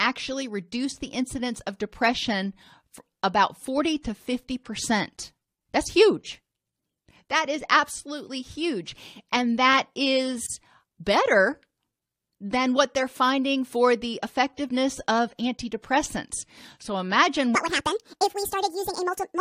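At 10.46 to 10.50 s, a gap at a join of encoded pieces opens a 33 ms gap in the speech. The pieces were encoded separately and joined untrimmed. Unlike a dropout, nothing is lost: the speech resumes exactly where it stopped, with smeared edges.

From 17.55 s to the end, a section at the wrong speed runs 1.74 times too fast, most likely from playback against the wrong clock. Pitch rises by close to ten semitones and tempo rushes together, which a pure pitch shift would not do.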